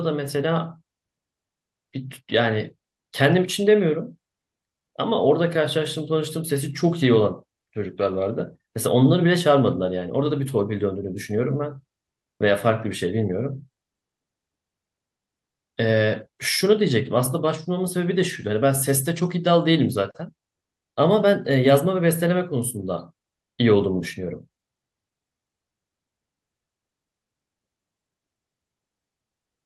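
Listening through the speech recording, nothing stood out as a technical problem.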